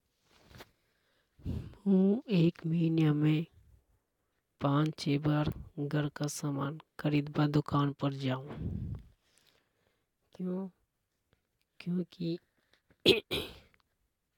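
No technical faults are audible.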